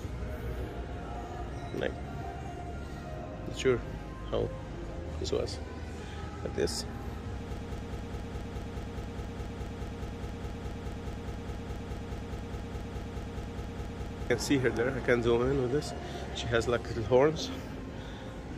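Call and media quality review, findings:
Broken-record loop, 7.57 to 14.30 s. Likely cause: player, encoder or stream stalled and kept re-sending its last buffered fragment instead of new audio. Result: one 0.21 s piece repeats back to back, 32 times, identical each pass. Audio due in that window is lost, not delayed.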